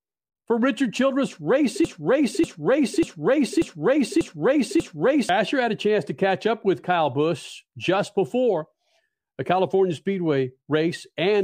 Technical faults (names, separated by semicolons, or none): broken-record loop